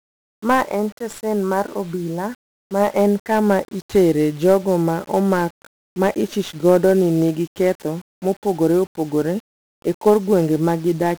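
From start to finish the speech sounds fuzzy and crackly, with a dense hiss smothering the treble. This is heavy 1-bit DFPWM compression: each sample is a single up-or-down step on an adaptive level, and the coarse steps leave strong broadband quantisation noise, consistent with a rate near 48 kbps.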